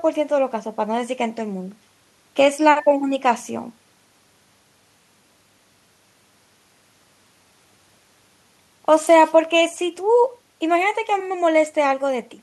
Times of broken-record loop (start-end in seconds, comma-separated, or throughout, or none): none